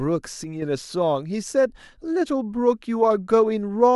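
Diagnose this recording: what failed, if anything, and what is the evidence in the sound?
A channel drops out from 0.44 to 0.62 s: for about 0.18 s the speech falls abruptly by about 6 dB, then returns to full level just as suddenly. That step is the signature of one side of a stereo pair going silent before the mono sum, since material shared by both channels loses half its contribution at once. The stage is likely the analogue wiring, such as a momentarily open connector on one channel.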